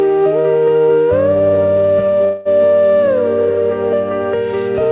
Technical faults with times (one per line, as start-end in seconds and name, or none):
2.24-2.48 call audio freeze